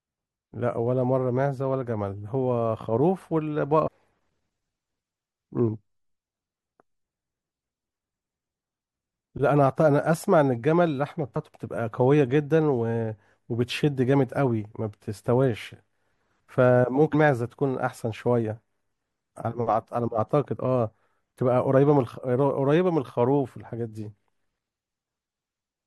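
Brief glitches cut through the speech at 3.86 to 3.88 s, 11.35 s and 17.13 s. This is damaged data in a compressed stream: corrupted frames are misread, and the decoder loses sync and hunts for the next valid frame header.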